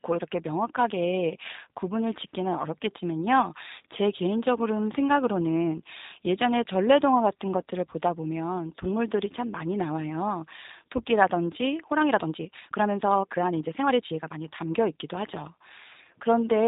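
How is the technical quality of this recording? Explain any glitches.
The technical quality is poor. The whole recording passes through a G.729 codec, and one section near the end has been time-stretched.

The G.729 coding runs throughout at 8 kbit/s, and its damage is plainly audible. The codec rebuilds the speech from a model of the vocal tract plus a few pulses per frame, so nothing above about 4 kHz survives and the voice sounds slightly rough and synthetic. Unlike simple band-limiting, which only muffles, this adds a buzzy, artificial texture.

From 11.68 to 14.44 s the speech suddenly runs about 1.44 times faster. The likely cause is software squeezing the passage to fit a length while keeping the pitch, by dropping short slices of audio. The pace jumps abruptly and sounds rushed. What separates this from a plain speed-up is that the pitch stays the same rather than rising.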